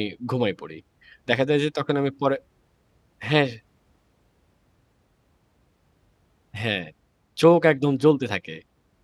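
No technical faults are audible.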